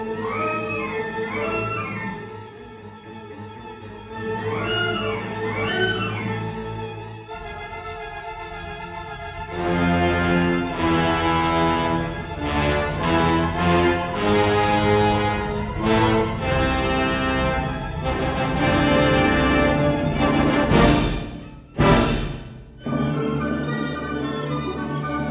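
No technical faults can be heard anywhere in the clip.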